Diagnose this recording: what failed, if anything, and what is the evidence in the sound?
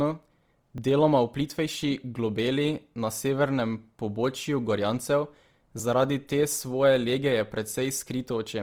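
Codec stage: the speech sounds grainy and rough all the way through, with noisy fill where fine detail should be, though the band still reaches about 20 kHz. That texture points to Opus compression, likely in CELT mode near 24 kbps, filling starved bands with noise.

Driver or buffer stage: there are jumps at 0.78 s and 5.8 s, each a slight forward skip in the speech with no silence. That's a dropped buffer (overrun), likely samples overwritten before the software read them, costing about 10 ms, then about 5 ms.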